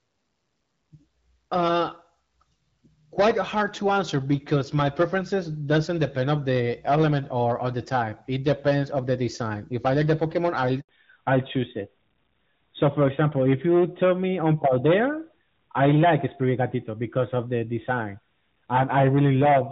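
At 10.81 s the speech cuts out to silence for 80 ms until 10.89 s. This is a handover gap: the call switched networks, and no speech frames arrived during the switch.

From 10.89 s to the end, everything above 4 kHz vanishes and speech turns duller and rougher than the clearer HD Voice sound before it. This is a fallback to narrowband, where the call dropped from the AMR wideband codec to an older narrowband one, which fits AMR-NB at around 12.2 kbit/s.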